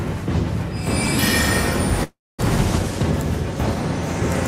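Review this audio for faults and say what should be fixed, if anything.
Call audio freeze at 2.03 to 2.41 s: the sound stops moving forward and the last moment is stretched into a fading tail that drops to silence for about 250 ms, then the audio resumes exactly where it left off. Nothing is lost, but 352 ms of filler has been inserted, so everything after it runs that much later. The likely cause is packets stalling in transit until the receiver's jitter buffer emptied. A larger or adaptive jitter buffer, plus steadier network routing, would prevent this.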